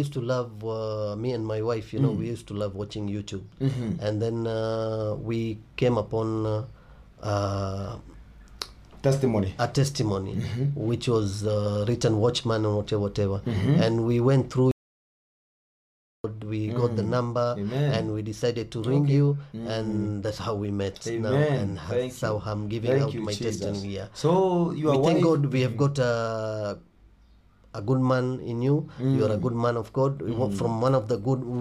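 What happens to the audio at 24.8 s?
Nothing goes wrong at 24.8 s; the audio plays through that moment intact, with no dropout, click or distortion.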